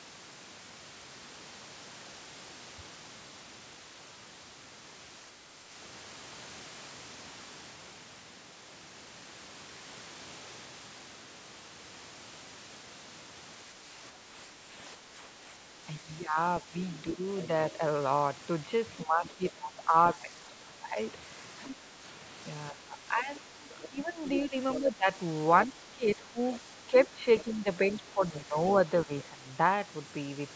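At 6.11 s the sound turns duller and stays that way to the end, with about 5 dB less level and faint new background noise roughly 35 dB down. There's no gap at the change, and it's likely an input switched to a poorer device, maybe a headset's call profile.

From 13.74 to 17.81 s the talker keeps dipping, by up to about 10 dB and for around 2 s in total. That's speech suppressed in double talk: the echo canceller likely couldn't tell the talker from the loudspeaker echo while both spoke, so it ducked everything. Right at the end of that stretch, 17.42 to 17.72 s, a faint second voice comes through about 20 dB below the talker, likely the other side's voice leaking through past the canceller.

The same pair returns from 19.05 to 29.45 s. The dips go deeper there, to about 15 dB, and add up to roughly 5 s. Scraps of that other voice slip through at 21.64 to 21.76 s (about 15 dB down), 23.70 to 25.66 s (about 10 dB down, the most noticeable) and 26.58 to 28.00 s (about 20 dB down).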